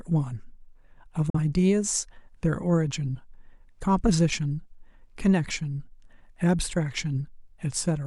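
At 1.30 s the speech cuts out in a digital broadcast dropout. The receiver muted after losing a frame, fading out in about 3 ms. Silence lasts until 1.39 s, a gap that fits a single lost frame. That audio is gone for good.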